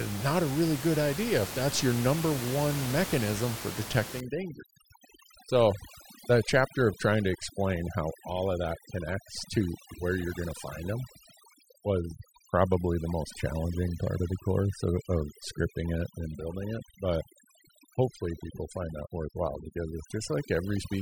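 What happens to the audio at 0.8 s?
Nothing goes wrong at 0.8 s: the speech passes through intact, with only the room's own background noise audible at about 11 dB below it, which is part of the recording rather than a system fault.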